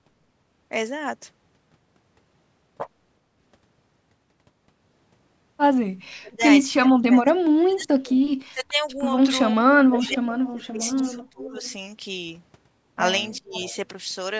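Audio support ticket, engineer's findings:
Speech suppressed in double talk: talker's level dips hard, around 35 dB at the deepest, over 6.16–9.02 s and 9.54–11.53 s, plus a short hit at 13.38–13.54 s. Likely the echo canceller's suppressor: both sides talking, it can't separate the local talker from the loudspeaker echo, so it pulls both down.

Echo leak: a faint delayed copy of the voice, 448 ms late, about 15 to 25 dB under the speech, in scraps at 10.01–10.08, 10.45–10.49, 10.81–11.19, 11.52–11.73 and 13.53–13.76 s. Likely the speakerphone side's canceller missing part of the mic pickup and sending that residue back.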